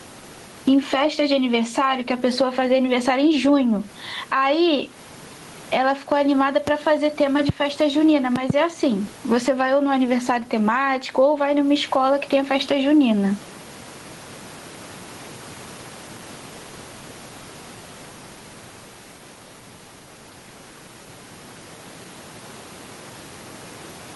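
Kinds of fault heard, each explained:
Gain pumping, throughout: the level swings by roughly 15 dB because a fast limiter clamps down on each loud syllable, likely behind input gain set far too high. The room noise sits about 34 dB below the speech.
Loud pop, at 6.67–6.70 s, 7.49–7.52 s and 8.36–8.52 s: a sudden voltage pulse, likely from a plug, switch, static or driver glitch, lands well above the speech, which continues underneath. The last is a double pop.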